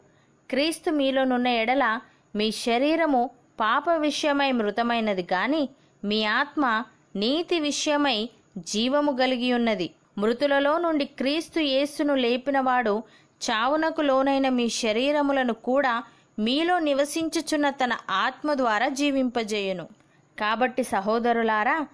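No technical faults can be heard anywhere in this audio.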